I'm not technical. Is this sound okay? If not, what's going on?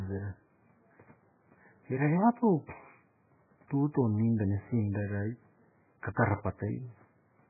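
No. All the way through, the speech sounds muffled and dull, as if heard through a wall, with nothing above about 2.5 kHz, so s and t sounds lose their crispness. Heavy watery, swirly warbling runs under everything too. The likely cause is MP3 compression squeezed very hard: the encoder cut away all the treble and kept dropping quieter parts of the sound from moment to moment. The faint room noise in the background is a normal part of the recording.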